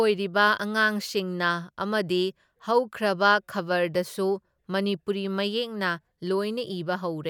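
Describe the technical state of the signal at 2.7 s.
At 2.7 s the speech signal is intact, with no dropout, clipping, distortion or other fault audible at that moment.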